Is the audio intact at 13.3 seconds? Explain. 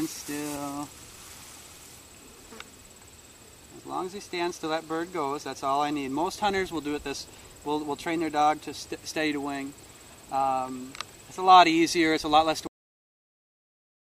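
No. At 13.3 seconds the clip is inside a cut-off end, which runs from 12.67 s to the end. The final buffers were never written, so the sound stops mid-event into digital silence with no decay. Unlike a dropout, the sound never returns.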